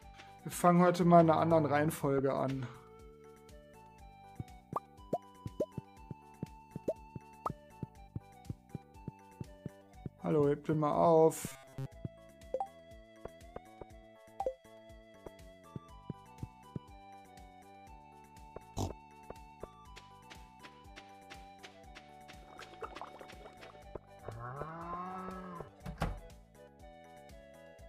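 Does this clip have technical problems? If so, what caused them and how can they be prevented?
Yes. From 11.48 to 11.86 s, robotic sound from repeated short buffers produces a rigid metallic buzz at 134 Hz. New audio likely arrived too seldom, so a roughly 7.5 ms segment looped through most of that span. A larger jitter buffer prevents this.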